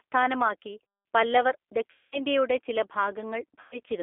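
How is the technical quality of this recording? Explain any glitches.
The quality is limited: the speech has narrowband codec coloration throughout and breaks down twice where audio was lost.

G.729 codec, throughout: the speech is rebuilt from a vocal tract filter, pitch predictor and a few pulses per frame at 8 kbit/s. It sounds slightly rough and synthetic, confined to about 300 Hz to 3.5 kHz.

VoIP packet loss concealed by the speech codec, at 1.91 to 2.22 s and 3.60 to 3.79 s: about 210 ms and 120 ms of audio went missing. The decoder extended its last pitch and filter with falling gain, so the speech smears into a fading buzzy tone or coloured noise, then stays weak briefly after recovery.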